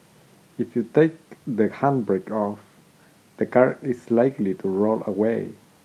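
No faults can be heard anywhere in this speech.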